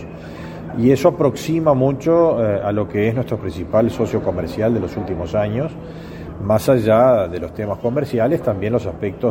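Nothing stood out as a technical fault on listening.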